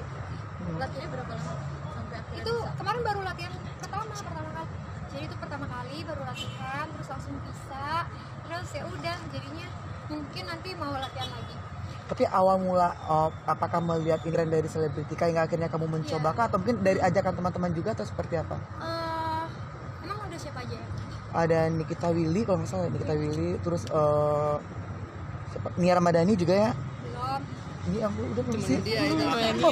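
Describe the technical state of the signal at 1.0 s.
At 0.99 to 1.01 s, compressed frames are skipped. The decoder drops whole frames, so the audio jumps ahead by roughly 100 ms, which fits about five frames of 23.2 ms. The sound is heard as a sudden jump forward at the join.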